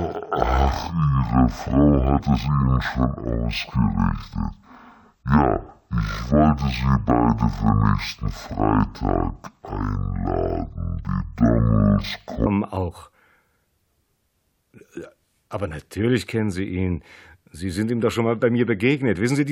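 From 0 to 12.46 s the audio plays at half speed and an octave low, a fault known as stereo read as mono. Alternating left and right samples are treated as consecutive samples of one channel, halving the rate, with a faint mirrored image appearing in the upper spectrum.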